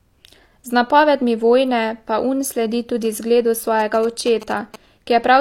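A speech clip carrying GSM signalling bursts from 3.80 to 4.76 s, right after "sledi tudi zgledu": a galloping dit-dit-dit of short 217 Hz buzzes, roughly 15 dB below the speech, as the audio circuit rectifies radio bursts from a nearby 2G phone exchanging signalling.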